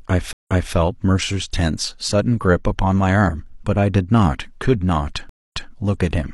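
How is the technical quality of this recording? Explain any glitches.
Two stream reconnects break up the speech. At 0.33 to 0.74 s and 5.29 to 5.70 s, the connection dropped and a fresh decoder restarted mid-stream. You hear gaps of 136 ms and 221 ms, then the speech resumes 279 ms and 186 ms earlier, repeating a short stretch.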